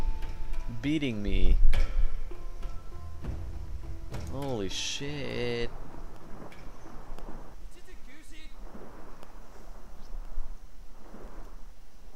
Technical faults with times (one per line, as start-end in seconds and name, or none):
5.14-11.28 periodic USB or driver dropouts